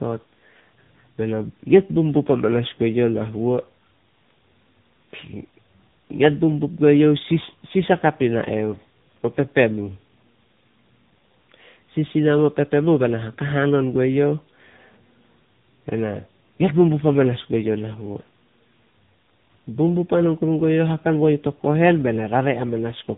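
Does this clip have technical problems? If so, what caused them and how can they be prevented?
Yes. The speech suffers from tandem speech coding throughout: it passed through three speech codecs in a row, with CVSD twice and AMR-NB at 7.95 kbit/s last. Each decoded and re-encoded the previous coder's errors. Unlike a single low-rate codec, the roughness, muffling and warble are compounded beyond what any one stage would cause. Unlike simple band-limiting, which would only remove content above 3.8 kHz, the sound is also distorted. Transcoding-free operation or tandem-free links that carry one codec end to end would prevent it.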